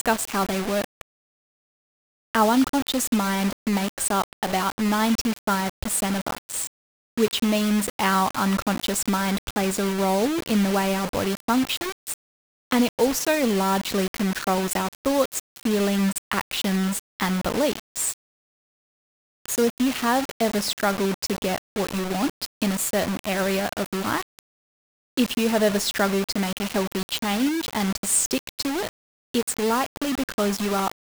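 From start to end, the speech carries coarse, grainy distortion that rises and falls with it, and quiet passages sputter or vanish. The likely cause is low bit depth without dither, consistent with 4-bit rounding. The waveform shows blocky steps, and the spectrogram shows broadband hash following the speech.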